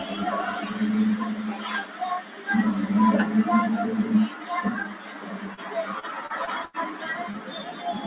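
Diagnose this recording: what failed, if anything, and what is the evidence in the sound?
The level pumps and breathes across the whole clip. Sustained parts and decays sink while onsets punch through, with gain swinging by roughly 10 dB. This is a noise suppressor applied to music or sounds, in the call processing stage. A suppressor tuned for speech hears steady tones and ambience as background noise and keeps riding them down, so the texture thins and flutters instead of holding its body.

Four passages dip further than the rest, each a sound cut by the noise suppressor. They fall at 1.85–2.0 s (about 6 dB), 2.22–2.48 s (about 6 dB), 4.31–4.46 s (about 5 dB) and 4.87–5.72 s (about 6 dB). The last is the longest, close to a second. In each case the suppressor decided the sound was noise and turned it down harder than the rest.

Two brief smears break the flow, at 5.54–5.61 s and 7.31–7.36 s. 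Each is short concealed packet loss on the network side. Roughly 30 ms of audio failed to arrive, and the decoder papered over the hole by extending the preceding sound before crossfading back to real audio. What you hear is a momentary smear or wobble rather than a clean gap.

From 6.0 to 6.77 s the audio turns choppy. This is repeated packet loss (robotic sound). Four separate holes land within that stretch, the longest about 90 ms, and roughly a fifth of the span is synthetic fill. The losses come so close together that the concealment never fully recovers between them, producing the stuttering, robotic texture. The band-limited sound, with nothing above 4 kHz, fits a G.711-style narrowband call codec.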